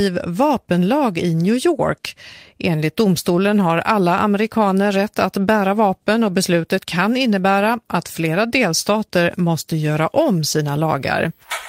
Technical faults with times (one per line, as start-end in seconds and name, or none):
none